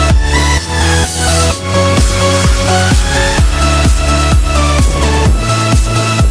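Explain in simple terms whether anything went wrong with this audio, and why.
Nothing went wrong that I could hear; listening closely, no glitch, break or odd sound stood out anywhere in the audio.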